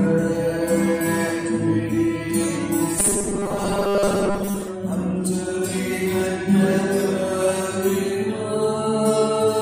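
From 2.99 s to 4.68 s the sound takes on a rigid, metallic buzz pitched at 200 Hz: robotic sound from repeated short buffers. The likely cause is fresh audio arriving too slowly, so playback keeps looping the most recent 5 ms block instead of advancing, with most of that stretch made of repeats. Looping a 5 ms block forces the fixed 200 Hz tone, while the underlying sound's contour still faintly shows through.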